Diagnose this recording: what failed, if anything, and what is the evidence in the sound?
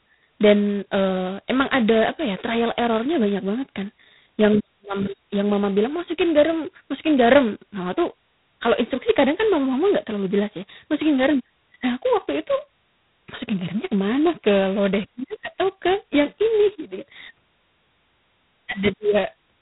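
The codec stage failed: the speech went through G.726 ADPCM at a very low rate. The heavy, rasping hiss that rises and falls with the speech level throughout points to the 16 kbit/s mode. That mode spends only 2 bits per sample on the error between each sample and an adaptive prediction, so quantisation noise tracks the signal. Nothing passes above 3.9 kHz, giving the narrow telephone-band sound.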